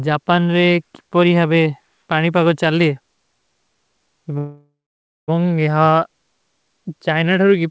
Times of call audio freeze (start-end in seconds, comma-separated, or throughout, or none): 4.38-5.30